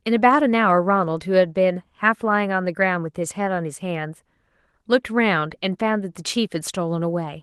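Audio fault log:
No fault to log at any time or range.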